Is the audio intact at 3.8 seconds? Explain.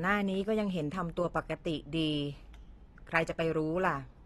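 No. AAC compression, likely at a low bitrate around 32 kbps, runs throughout: quantised spectral bands leave nothing above 12.4 kHz, making the speech dull, smeared and fizzy.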